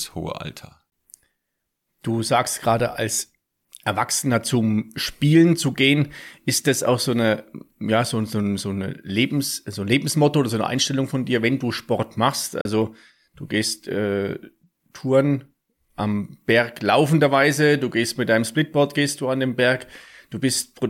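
The speech cuts to silence twice, at 0.90 to 0.92 s for about 19 ms and at 12.61 to 12.65 s for about 37 ms, then resumes further along. These are likely Bluetooth dropouts, where late packets were discarded, the gaps fitting one and two lost packets.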